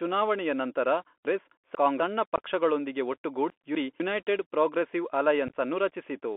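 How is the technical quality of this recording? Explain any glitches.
The technical quality is poor. The recording sounds like it passed through a narrowband Bluetooth headset link, and it has two reordering glitches and two dropout glitches.

Bluetooth CVSD headset codec, throughout: the speech is squeezed into roughly 250 Hz to 3.4 kHz, which fits a 64 kbit/s CVSD link. This codec encodes one up-or-down bit per sample with an adaptive step, so fast high-frequency energy outruns the step. That leaves plainly audible granular hiss, scratchy sibilants and a thin, boxy tone.

Chunks out of order, at 1.25–2.0 s and 3.5–4.0 s: 250 ms blocks were written late. In the first event a block lands two blocks behind where it belongs, and in the second it lands one block behind. No audio is missing, but each passage sounds jumbled, with hard joins at the splice points.

Unconcealed Bluetooth headset packet loss, at 2.36–2.41 s and 5.48–5.56 s: short voice packets between headset and phone never arrived, and nothing filled the gaps. 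The first event loses about 19 ms of audio within that span. The second scatters about 52 ms of loss across 82 ms, with no gap longer than 15 ms. That sounds like a brief crackly, chopped stretch with abrupt edges.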